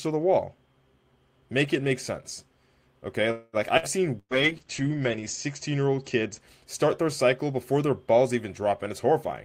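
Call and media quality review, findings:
Call audio freeze, 3.31–3.56 s. The sound stalls and the last sound carries on as a fading buzz or hiss for about 0.22 s. A brief dead spot of about 10 ms follows. Playback then resumes exactly where it stopped, with nothing lost. The stream now runs about 218 ms later than before. Likely cause: packets delayed in transit, jitter buffer drained, receiver concealing until arrivals resume.

Burst of packet loss, 3.77–3.86 s. A short held buzz or hiss of about 54 ms, then a jump ahead. About 60 ms of audio is gone. Packet loss concealment at the receiver extends and fades the last sound. Second burst at 4.19–4.34 s. About 120 ms is lost: roughly 60 ms of concealment tail, then about 60 ms of silence. The audio restarts further on.

Call bitrate drop, 4.22–6.47 s. The audio turns coarse, watery or muffled. Top end narrows from 20 kHz to about 8 kHz. 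Encoder target fell from 32 to 10 kbps after the bandwidth estimate dropped. Worst quality holds for about 1.15 s. Drop begins just before "start their cycle before". Opus encoder coding with fewer bits and low-passing at the reduced rate.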